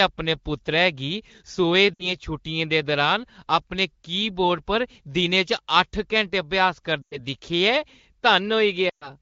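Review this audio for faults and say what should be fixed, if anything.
Lost AMR speech frames: radio errors made frames fail their checksum, so the AMR-WB decoder stretched the last good pitch and vocal tract settings with falling gain. At 1.93–2.13 s (60 ms lost), 7.02–7.19 s (100 ms) and 8.90–9.11 s (120 ms), speech smears, fades quickly toward silence, then resumes weak or rough. Better radio coverage or stronger error protection on the link would cut these frame losses.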